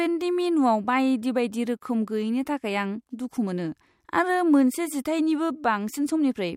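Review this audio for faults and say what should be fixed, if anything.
Nothing to fix: no faults found in the speech.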